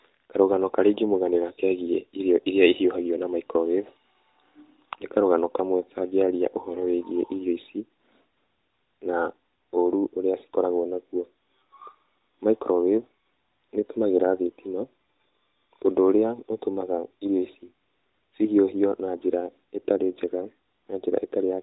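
Nothing goes wrong here; it's speech carried over a mobile call at the usual narrowband quality you'd expect from AMR-NB at 12.2 kbps.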